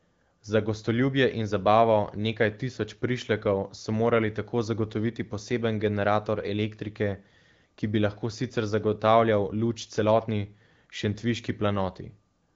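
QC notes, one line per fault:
Nothing stood out on listening, with the speech showing only the expected band limit of the AMR wideband (HD Voice) codec, nothing above 7.3 kHz.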